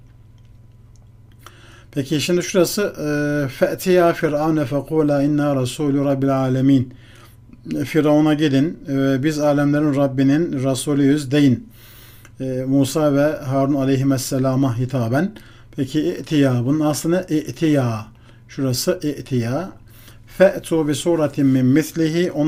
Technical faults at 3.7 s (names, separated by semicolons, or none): none